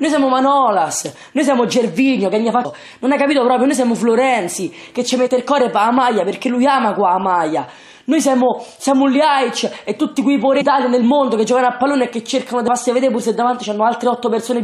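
Short glitches at 2.64 s, 5.26–5.28 s, 10.60–10.62 s and 12.67 s come from damaged data in a compressed stream: corrupted frames make the decoder lose sync and resync.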